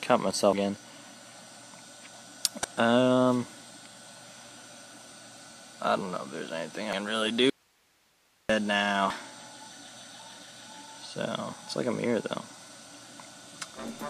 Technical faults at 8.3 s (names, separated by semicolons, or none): audio dropout to a faint residue